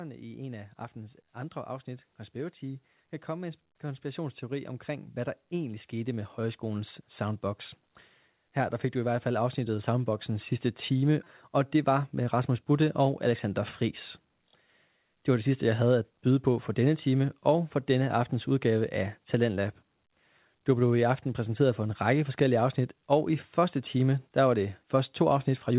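Speech heard through a narrowband call path, with nothing above 4 kHz, consistent with G.711 A-law coding, carrying two passes of automatic gain rising. From 0.2 to 7.48 s the gain control, reacting to a quiet input, lifts the level by about 11 dB, so voice and background noise swell together. A second, gentler rise of about 4 dB runs from 8.97 to 11.28 s.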